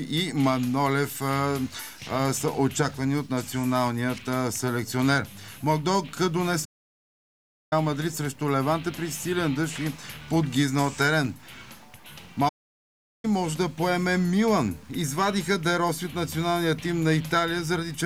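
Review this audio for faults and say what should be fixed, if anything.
Playback stalls at 6.64 to 7.73 s and 12.48 to 13.25 s: the sound cuts out mid-flow for about 1.07 s and then 0.75 s before resuming, likely because the player's buffer ran dry or its audio thread was blocked. Larger playback buffering and keeping the audio thread free of blocking work would prevent this.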